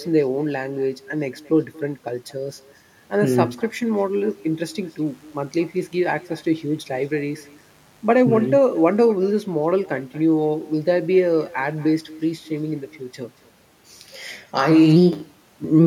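From start to finish the speech carries an echo with no canceller: the far end's loudspeaker output is picked up by its microphone and returned unremoved, so each phrase is trailed roughly a fifth of a second later by a thin copy about 23 dB below it.

From 5.06 to 9.05 s a mains buzz sits under the speech, a steady, raspy 50 Hz hum with harmonics climbing into the kilohertz range. Sharp switching spikes from a dimmer, rectifier or poor shielding have leaked in, around 35 dB below the signal.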